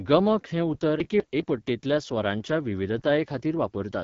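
Throughout, the AMR wideband (HD Voice) codec leaves the speech rough and raspy, which fits its low 8.85 kbit/s mode. A spectrogram shows nothing above 7.5 kHz, with noisy texture near the top.

From 1.0 to 1.4 s, after "गमक हें उतर" and before "पट्टेंतल्या स्वरांच्या", chunks out of order swap two 200 ms blocks. The result sounds jumbled, and the waveform shows hard discontinuities at three joins.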